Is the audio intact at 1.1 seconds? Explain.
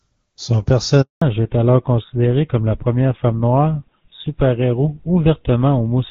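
No. At 1.1 seconds the speech sits inside a handover gap running from 1.02 to 1.22 s, about 200 ms. The call switched networks and no speech frames arrived, so the sound fades within tens of milliseconds into silence. On a waveform it is a flat line, and on a spectrogram a blank vertical band across all frequencies.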